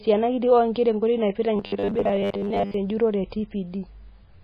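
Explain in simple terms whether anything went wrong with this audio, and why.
Two things went wrong. The whole clip has heavy damage that is likely from MP3 compression. Quiet details flicker in and out, which gives the speech a watery, swirly quality. Sharp starts of sounds are smeared. This happens when the encoder has too few bits and drops the parts it judges least important.

From 1.56 to 2.74 s the speech turns into a rigid, metallic buzz. This is robotic sound from repeated short buffers, and the likely cause is audio arriving too slowly. The player fills the gaps by replaying tiny slices, and most of the real sound in that stretch is skipped. The buzz sits at 100 Hz, which fits slices about 10 ms long. The speech still roughly follows its shape, but it sounds machine-like.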